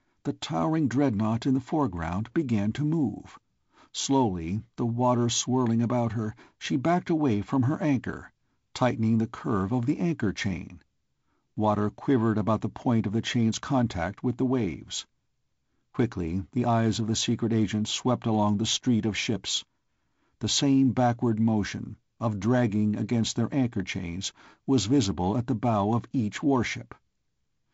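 The speech comes through a G.722 wideband telephone path with no technical faults, its top end stopping near 7.7 kHz and carrying the light coding hiss and slightly grainier lower band that fit the 48 kbit/s mode.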